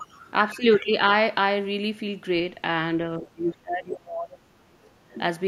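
From 3.18 to 4.82 s the speech sinks sharply, dropping by roughly 30 dB at its deepest, then dips again more lightly, by about 15 dB, from 5.01 to 5.16 s. This is likely speech suppressed in double talk: with both ends talking, the echo canceller mistook this voice for loudspeaker echo and turned it down. Unlike a packet dropout, the voice is turned down rather than lost to clean, hard-edged gaps.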